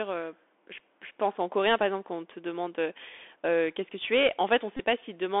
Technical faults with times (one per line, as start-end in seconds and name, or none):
0.00-5.40 Bluetooth CVSD headset codec
4.77-4.80 Bluetooth headset packet repeated